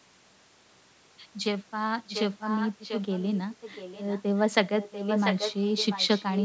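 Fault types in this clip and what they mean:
Echo leak: a fainter copy of the speech returns 0.69 s late from about 2 s onward, likely because a loudspeaker-side echo canceller let the pickup through.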